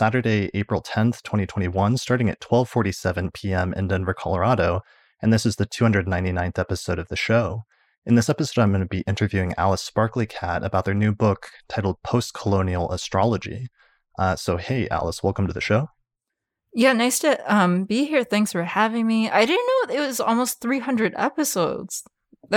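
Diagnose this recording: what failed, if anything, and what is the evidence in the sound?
Nothing in the chain audibly failed: no stage from analogue wiring through capture, processing, transmission or playback leaves a fault in this speech recording.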